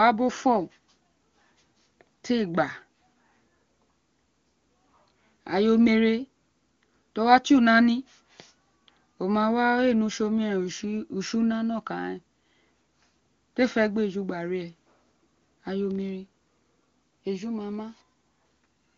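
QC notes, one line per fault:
No faults found; the speech passes through an AMR wideband (HD Voice) path with nothing above 7.3 kHz and at most faint coding damage, which fits the codec's top 23.85 kbit/s mode.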